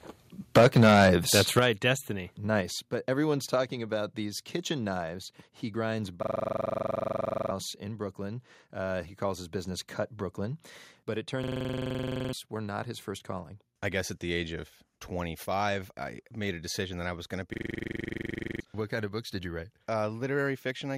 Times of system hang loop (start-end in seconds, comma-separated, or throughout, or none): 6.23-7.51, 11.43-12.33, 17.54-18.60